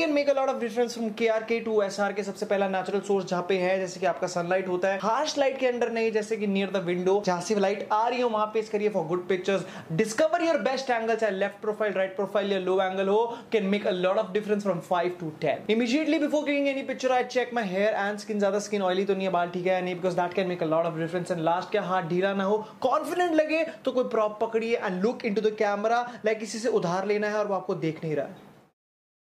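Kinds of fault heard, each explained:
No dropouts, clipping, glitches or other technical faults can be heard anywhere in the signal.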